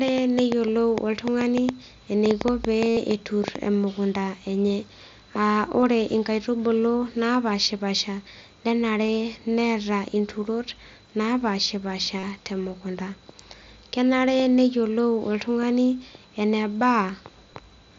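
From 0.08 to 3.57 s a train of clicks runs over the speech: about twenty sharp pops at roughly five per second, irregularly spaced, peaking about 15 dB above the signal and audible in the pauses too. Their similar shapes point to a likely source in electrical interference or a struggling interface. On a waveform they are thin vertical spikes; on a spectrogram, full-height broadband lines at uneven intervals.

Overlapping the end of that stretch, concealed Bluetooth headset packet loss appears from 2.90 to 2.97 s. For 75 ms the receiver repeats the best-matching recent cycle, giving a buzzy tone held at full level with a slight warble where real audio resumes. This gap fits about ten consecutive lost packets. Shorter losses follow at 4.69, 5.81 and 9.07 s, each about 15 ms and nearly hidden, and a 37.5 ms loss at 12.19 to 12.23 s adds a brief buzz. The spectrogram shows these as short blocks of evenly repeated harmonics, and the waveform shows identical repeating periods. 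The mSBC link's 8 kHz ceiling frames all of this.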